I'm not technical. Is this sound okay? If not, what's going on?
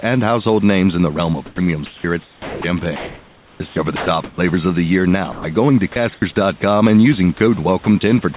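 No. Sound chopped by the voice detector, at 1.46–4.38 s after "in the realm of", 5.32–6.22 s after "of the year now", and from 7.38 s to the end after "and using". The sender's system likely mistook quieter speech for silence and swapped it for artificial hiss, so the speech cuts in and out.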